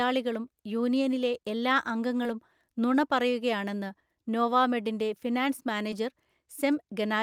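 A brief smear in the speech at 2.23 to 2.27 s, and again at 5.91 to 5.94 s, is short concealed packet loss. About 20 ms of audio arrived too late each time, so the decoder extended the preceding sound before blending back into the real signal.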